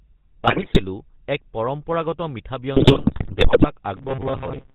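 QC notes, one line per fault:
Throughout, GSM full-rate codec. The speech has a buzzy, gravelly roughness and nothing above 4 kHz. The codec models the vocal tract and rebuilds its excitation from sparse regular pulses, which fits the 13 kbps full-rate coder. Codec damage is plainly audible.
0.44–0.80 s and 2.74–3.70 s, GSM bit errors. The speech breaks into squawks, pops and gargling, ending just before "এক পৰম্পৰাগত মিঠা" and starting just after it. Corrupted filter, pitch and gain values distort frames, which fits bit error rates of about 5 to 7 percent.
3.97–4.74 s, robotic sound from repeated short buffers. The speech becomes a rigid metallic buzz at 133 Hz that still roughly follows the words. Audio is likely arriving too seldom, so a short chunk of about 7.5 ms is looped and about half the real audio is skipped.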